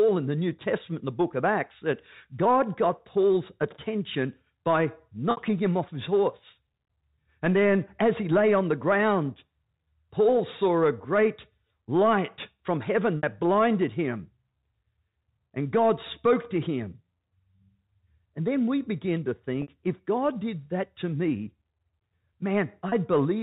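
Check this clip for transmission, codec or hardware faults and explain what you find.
Four short dropouts are bridged by packet loss with pitch repetition, at 5.31–5.37 s (after "attention by", before "him off his horse"), 13.18–13.23 s (after "great light from heaven", before "blinded him"), 19.62–19.68 s (after "then we begin to") and 22.89–22.92 s. Three gaps last about 60 ms and the last about 30 ms, which fits losses of two packets and one packet. The receiver fills each gap by looping the last pitch period, so a brief held, buzzy note appears instead of a hole. That tonal smear is what sets it apart from a plain dropout, which would leave a click or silence. The telephone band of the G.711 path can be heard throughout.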